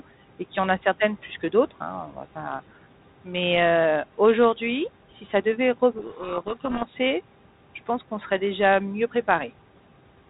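Between "plus que d'autres hein" and "va pas", from 2.07 to 2.17 s, the noise suppressor cuts speech, dipping it about 9 dB. It fades rather than dropping to silence. From 5.98 to 6.95 s, after "si ça devait rev", a codec payload misread buries the speech in harsh distortion. The G.726 bit order is reversed, so the decoder misreads every code word. Unlike ordinary ADPCM roughness, it starts and stops abruptly.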